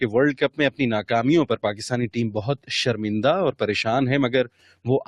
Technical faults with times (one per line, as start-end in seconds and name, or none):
0.00-5.07 noise suppressor applied to music or sounds
0.33-0.80 sound cut by the noise suppressor
2.37-2.70 sound cut by the noise suppressor
4.44-4.87 sound cut by the noise suppressor